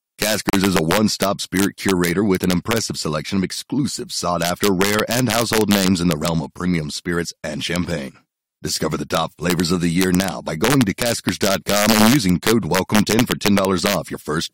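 Integer overflow runs throughout: loud peaks, pushed about 2 dB past full scale, wrap to the opposite sign instead of being limited, producing sharp, violent cracks on a small fraction of samples. A gap at a join of encoded pieces opens from 0.50 to 0.53 s, just before "is a one stop": separately encoded segments were joined untrimmed, leaving a gap of about 34 ms with smeared edges.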